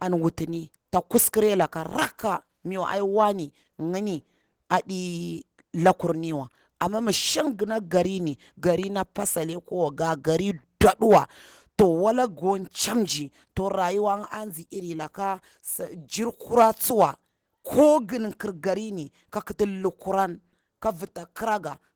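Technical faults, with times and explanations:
Throughout, Opus voice compression: the speech has a plainly audible coded quality, a bit hoarse and slightly robotic, even though the band still reaches about 20 kHz. That fits a hybrid setup at around 16 kbps, with coarse linear-prediction coding underneath and a thin transform layer on top.
8.83–8.85 s, loud pop: right after "gona garini" there's a single sharp pop peaking a few dB above the speech, which carries on underneath it. It's likely a voltage step from a plug, switch or static spike getting into the signal.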